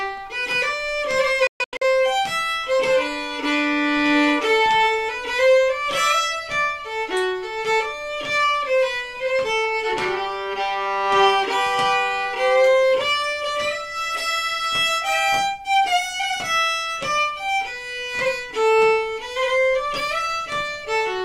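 From 1.47 to 1.83 s, a digital broadcast dropout: the receiver mutes failed frames, leaving short silent holes with near-instant fades, not analogue hiss.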